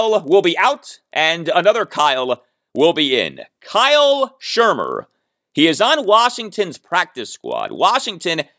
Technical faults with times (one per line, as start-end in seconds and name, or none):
0.00-8.58 resampler restarted on every block